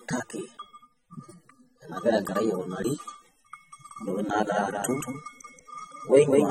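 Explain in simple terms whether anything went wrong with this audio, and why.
Yes, two things went wrong. Throughout, the speech sounds dull, smeared and fizzy, most likely AAC compression squeezing the sound too hard and throwing away detail.

From 3.91 s to the end, a second, somewhat quieter copy of the speech trails about a fifth of a second behind, likely a doubled audio track from the same sound being mixed in twice.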